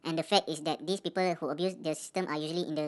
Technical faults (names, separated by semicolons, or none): wrong sample rate